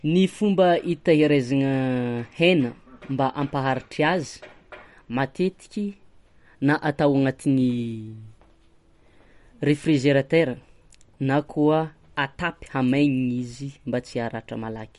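Throughout the speech, everything above 11.2 kHz is missing, and the remaining sound has a watery, swirling quality with smeared consonant attacks. This is likely MP3 compression at a bitrate near 48 kbps, where starved bits cut the treble and toggle weak frequency components between frames.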